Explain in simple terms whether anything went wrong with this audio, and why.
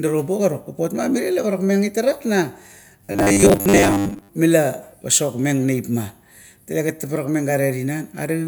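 From 3.05 to 4.29 s the speech becomes robotic sound from repeated short buffers: a fixed 100 Hz metallic buzz, likely from looping roughly 10 ms snippets, not silent gaps.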